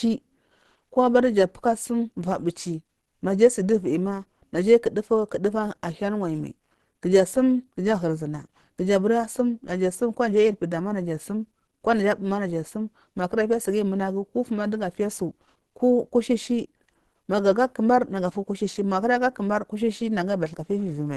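Heavy low-bitrate encoding, likely Opus compression in its hybrid speech mode at a rate consistent with about 16 kbps, runs throughout. Nothing reaches above 12.2 kHz, and the speech sounds plainly muffled and hoarse, with a rough, grainy texture from start to finish.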